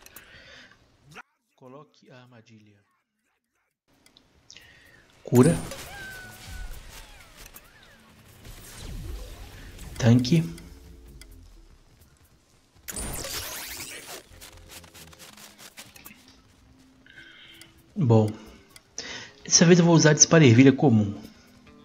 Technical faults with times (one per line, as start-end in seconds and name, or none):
1.21-3.88 one channel inverted